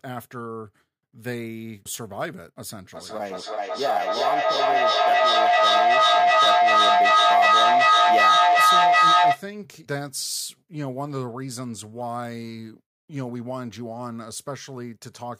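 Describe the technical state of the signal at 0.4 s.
At 0.4 s the signal is intact, with no audible fault at that point.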